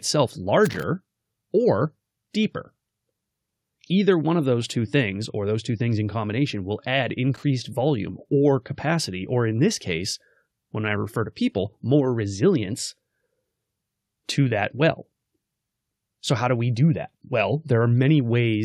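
Brief irregular bursts of crackle break up the speech at 0.65 to 0.83 s and 7.34 to 7.44 s, typical loose connector crackle from a worn contact making and breaking.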